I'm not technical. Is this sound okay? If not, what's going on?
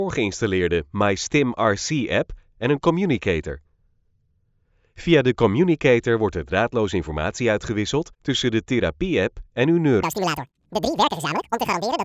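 No. From 10.03 s to the end, the sound suddenly runs twice as fast and a full octave higher. This is a wrong sample rate: it is being played back at double speed, which fits 16 kHz audio played at 32 kHz.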